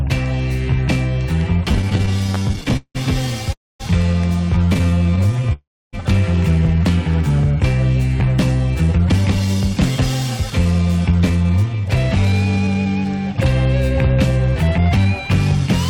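From 1.69 to 2.97 s, repeated stalls (stutter) set in. The jitter buffer keeps running dry, and 27 short gaps are filled by stretching the last sound, the longest lasting 179 ms. The audio drags and judders, and the waveform shows repeated, smeared segments.

At 3.53 s a call audio freeze holds for 270 ms, likely from packets delayed in transit. A brief buzz fades into about 240 ms of silence, which appears as a blank column on the spectrogram before the sound resumes at 3.82 s.

A second stutter runs from 4.66 to 5.53 s, with 17 very short fills of at most 12 ms. It leads straight into another freeze lasting 400 ms, ending at 5.95 s. That freeze is mostly silent for about 300 ms and shows as a flat waveform gap.

A jitter buffer speed-up follows from 8.81 to 9.62 s at 112% speed, trimming pitch periods to shed the built-up delay. It recurs from 10.50 to 13.28 s at 109%, removing around a third of a second, and again from 14.62 to 15.06 s at 113%. 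These sections sound hurried at unchanged pitch. The spectrogram shows the harmonics unshifted while events arrive compressed in time.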